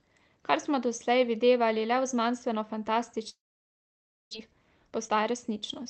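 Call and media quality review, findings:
Long network dropout, 3.29 to 4.35 s. Audio decays into a fading buzz or hiss, then near-silence for about 0.94 s. Likely packet loss on the network path: the receiver concealed the gap, and about 0.6 s of audio never plays when sound resumes.

Jitter buffer speed-up, 4.39 to 5.87 s. Speech runs about 124% fast at unchanged pitch and sounds hurried. The buffer sheds backlog from the late burst by cutting repeated pitch-period slices, roughly 0.4 s in total.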